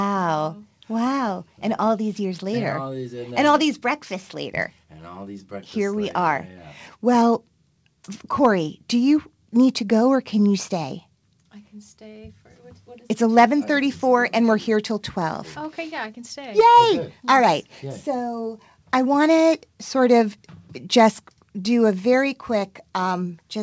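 No technical faults are audible.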